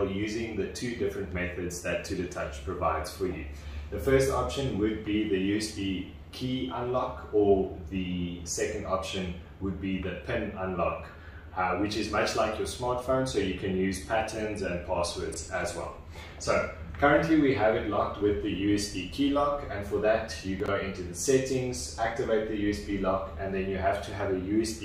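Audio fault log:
15.32 to 15.36 s and 20.6 to 20.68 s, chunks out of order: a 20 ms chunk plays one slot late, then another plays three slots late. Nothing is lost, but each misplaced piece creates three hard joins, heard as brief jumbled moments.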